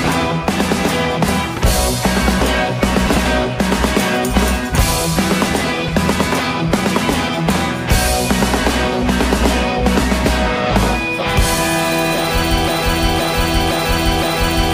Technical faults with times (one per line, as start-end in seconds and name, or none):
1.55-1.63 frames out of order
3.06-3.26 frames out of order
5.87-5.96 frames out of order
12.68-14.74 broken-record loop